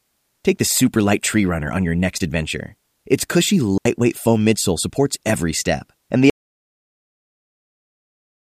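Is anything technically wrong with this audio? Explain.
Yes, there are two problems. At 3.78 to 3.85 s there's a digital wireless dropout: the radio link lost too much data, so the receiver muted for about 75 ms with a quick fade. You get a clean little hole with no noise burst, right before "foam midsole supports every".

Then from 6.30 s to the end there's an audio dropout to silence. Right after "every step and the", the sound cuts off mid-flow into silence with no room tone at all. It's likely a lost input, such as a disconnected device or a stray mute, while the recorder kept writing, so everything after that point is gone.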